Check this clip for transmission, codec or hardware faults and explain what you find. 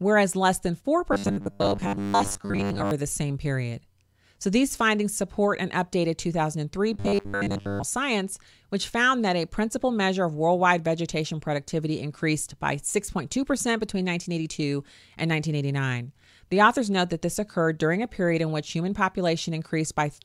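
Robotic sound from repeated short buffers occurs at 1.13 to 2.91 s and 6.94 to 7.84 s. The likely cause is audio arriving too seldom, so roughly 10 ms chunks loop to fill gaps, replacing most real audio and imposing a rigid, metallic 100 Hz buzz on the speech.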